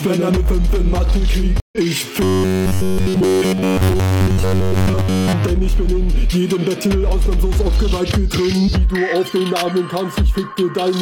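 At 1.6 s the audio breaks off in a stream reconnect that runs to 1.78 s. The link dropped and the player fell silent for 127 ms. It then reconnected and started a fresh decoder partway through the stream. When sound returns, it picks up about a tenth of a second further on, so a small piece is simply missing. The jump is abrupt, with a brief soft onset as the new decoder starts.

From 2.24 s to 5.33 s the sound turns robotic, likely from repeated short buffers. The tone becomes a rigid, metallic buzz pitched at 93.8 Hz. That rate fits a fragment about 10.7 ms long being replayed over and over while fresh audio fails to arrive. Almost nothing new gets through in this stretch. The buzz still loosely tracks the rise and fall of the underlying sound.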